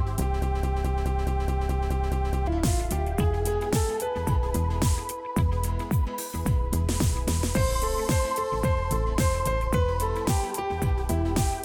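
At 0.42 s the audio locks into a broken-record loop that runs until 2.47 s. A fragment of about 212 ms plays back to back ten times, identical each pass, giving a rigid stuttering repetition. The likely cause is a stall in the player, encoder or stream, which kept resending the last buffered chunk. Whatever should have sounded in those two seconds is missing.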